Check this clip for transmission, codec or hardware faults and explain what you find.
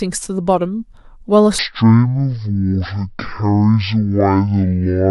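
One fault is present: a section at the wrong speed. From 1.59 s to the end, the speech plays at half speed, likely from a clock mismatch, dropping pitch around ten semitones into a slow, deep drawl.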